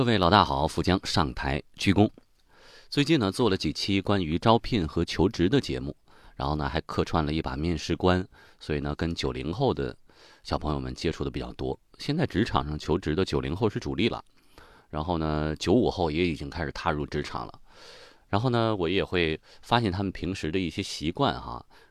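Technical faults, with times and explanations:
No technical faults detected.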